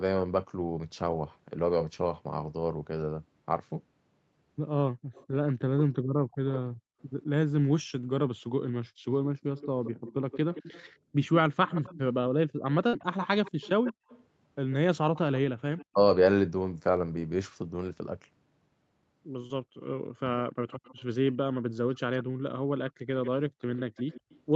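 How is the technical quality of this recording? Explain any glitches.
The recording is speech carried over a call. Its bandwidth stops at 8 kHz, and echo-control and network faults cluster in two stretches.

Background gated by the echo canceller happens from 4.93 to 14.08 s and again from 19.64 to 23.61 s. The canceller clamped the microphone while the far side played. Room sound dips by about 39 dB and then about 38 dB. The drops total roughly one second in the first stretch and a third of a second in the second.

Echo leak runs from 5.13 to 15.85 s, and from 19.81 s to the end. A faint delayed copy of the speech trails behind it. The delay is 171 ms at first and 143 ms later. The copy sits roughly 15 dB, then 20 dB, below the speech. The likely cause is a loudspeaker-side canceller letting residue through.

Speech suppressed in double talk appears from 5.52 to 6.37 s and from 20.22 to 20.31 s. 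The speech briefly dips, by roughly 40 dB and then 20 dB. The losses total about 0.2 s and 70 ms. This is likely the canceller muting both talkers when they overlapped.

A burst of packet loss hits from 12.87 to 12.95 s. The receiver stretched the last sound for 54 ms while fading it, so it briefly holds or hisses. Then 60 ms of audio is simply gone and playback jumps ahead.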